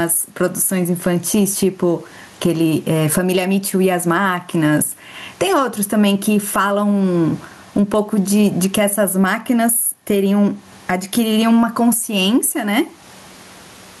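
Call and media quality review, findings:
Gain pumping throughout: room noise (about 42 dB below speech) swells in pauses, ducks under each loud syllable, swinging around 20 dB. Likely mic gain far too high, fast limiter clamping every peak; loud and soft parts squashed together.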